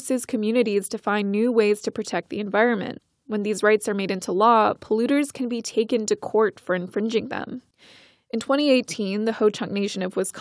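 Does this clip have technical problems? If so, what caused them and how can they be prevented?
No, nothing stood out as a technical problem on listening to this speech clip, so there is nothing here to trace to a cause or prevent.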